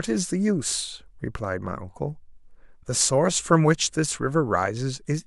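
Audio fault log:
No fault can be heard anywhere in this speech recording, and the signal stays steady and unbroken throughout.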